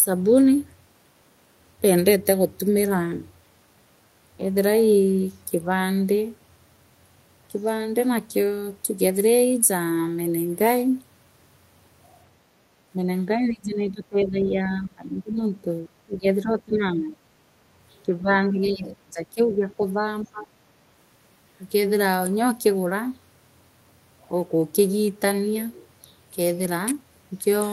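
Speech suppressed in double talk dips the speech by about 10 to 25 dB at 12.92–13.07, 13.32–15.44, 16.06–16.26, 16.43–17.2, 18.03–20.07 and 20.24–20.53 s. The likely cause is an echo canceller turning down the talker while the far end spoke.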